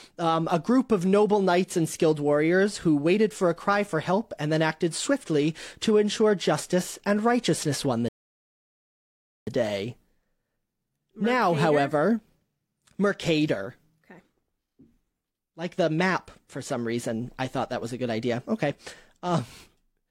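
At 8.08 s, right after "and righteousness won the", the speech drops abruptly into silence and stays there until 9.47 s, then picks up at exactly the syllable where it broke off, with nothing skipped. That is a rebuffering stall: the player used up the audio it had downloaded and paused until more data arrived. No content is lost, but the gap inserts about 1.39 s of dead air into the clip's timeline.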